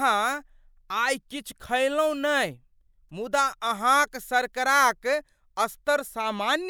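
No technical faults can be heard anywhere in the speech, so there is nothing to describe in time order.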